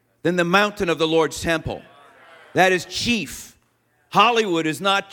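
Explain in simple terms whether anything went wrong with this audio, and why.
Nothing went wrong here; the speech has no glitches, gaps or odd noises anywhere in it.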